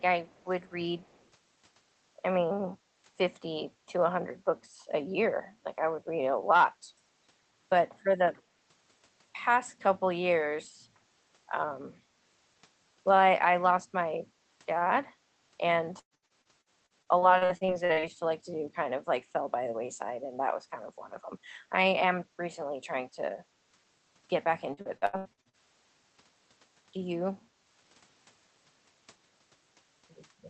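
Echo leak, 0.25 to 0.45 s: a very faint copy of the speech trails the original by 137 ms. This is likely the far end's loudspeaker feeding its microphone, with the echo canceller failing to remove the last of it before sending it back.

Background gated by the echo canceller, 15.06 to 15.21 s: the room sound dips by about 12 dB for roughly 150 ms, then returns. The canceller clamped the microphone while the loudspeaker was active and released it once playback eased.

Repeated packet loss (robotic sound), 15.99 to 18.05 s: audio arrived late or not at all again and again. Each hole was filled by stretching the preceding sound, so about a third of this span is patched. The result is choppy speech with breaks up to 115 ms.

Repeated packet loss (robotic sound), 24.74 to 25.56 s: the same pattern returns more densely. Close to half the span is concealed, with gaps up to 80 ms, giving a clipped, robotic stutter. 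Throughout, the high end stops at about 8 kHz, consistent with the Opus call codec's bandwidth.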